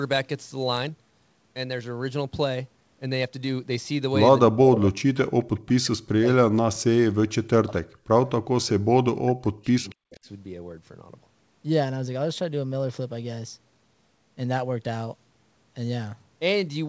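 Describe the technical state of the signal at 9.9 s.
At 9.9 s the signal is caught in speech suppressed in double talk, running from 8.57 to 10.28 s. The level dips by as much as 40 dB, likely because an echo canceller mistook overlapping talk for loudspeaker echo. Unlike a dropout, the gaps follow the other side's activity. Between 9.89 and 9.95 s there is also an echo leak: a faint copy of the sound 252 ms late, about 35 dB under the direct sound, likely residue from a loudspeaker that the canceller missed. Unlike reverberation, it is a distinct delayed repeat, not a smooth tail.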